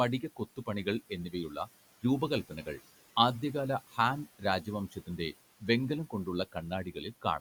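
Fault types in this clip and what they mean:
Speech cut by the noise suppressor: parts of the speech were treated as noise and turned down about 11 to 16 dB in six short stretches. The waveform shows sudden envelope dips, and the spectrogram shows faint, thinned speech sinking toward the room-noise floor.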